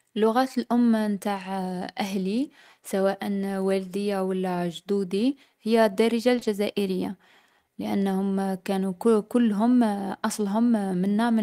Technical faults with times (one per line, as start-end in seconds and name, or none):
6.35-6.47 short concealed packet loss